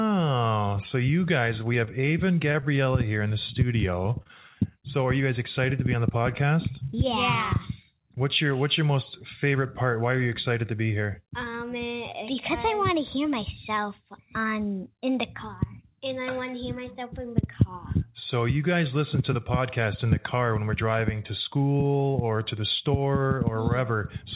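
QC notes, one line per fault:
1.74–2.84 s, repeated packet loss (robotic sound): several short holes, the longest 22 ms. Each is covered by stretching the previous sound, so the audio turns choppy over this stretch.
4.04–4.52 s, repeated packet loss (robotic sound): a tighter burst of holes up to 25 ms, filled the same way. The quick chain of repeats makes the sound briefly choppy within the narrowband call audio, which stops at 4 kHz.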